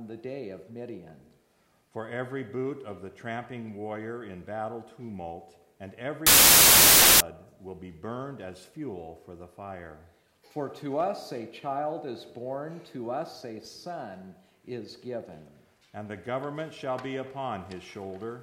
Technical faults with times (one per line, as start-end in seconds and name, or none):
6.27-7.20 wrong sample width